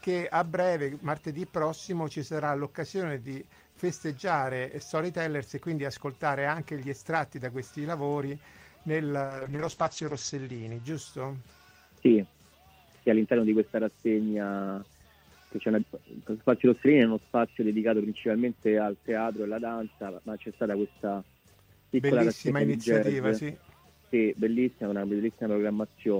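From 9.22 to 10.89 s the audio turns coarse and muffled, cut above 8 kHz: a call bitrate drop, pointing to encoding falling from 40 to 9 kbps.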